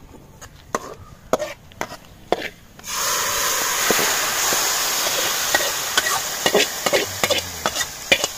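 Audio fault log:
1.03, 3.01, 4.99 and 6.96 s: audio missing between chunks. A likely handover between 2 s chunks drops about 20 ms each time, joining the edges with no gap into brief, evenly spaced skips.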